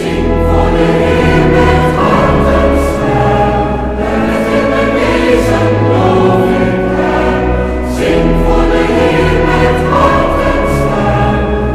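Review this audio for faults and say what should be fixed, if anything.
Hard clipping runs throughout: peaks overdrive the stage by about 5 dB, and roughly one percent of samples are cut flat, adding crackle on loud moments. Reduce gain before that stage so peaks keep some headroom.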